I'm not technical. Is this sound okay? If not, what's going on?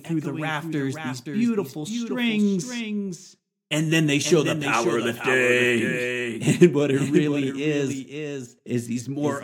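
No. The speech is heard twice throughout, which is a doubled audio track. A second full copy of the same speech runs about half a second behind the first, only somewhat quieter, so every phrase is followed by a clear repeat rather than a natural room echo. The repeat has no fading tail, which points to a recording fault and not the space. The likely cause is the audio being captured a second time through a slower route and mixed back in.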